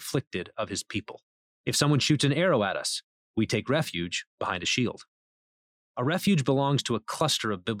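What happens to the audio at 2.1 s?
Nothing goes wrong at 2.1 s; the speech carries on intact through that moment.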